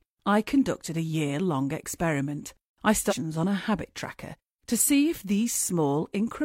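At 3.07 to 3.13 s, just after "year long experiment I", the speech jumps forward with a brief blip, likely a stream segment skipped by the player. Unlike a dropout, there is no silent gap to wait through: the speech resumes with a chunk missing.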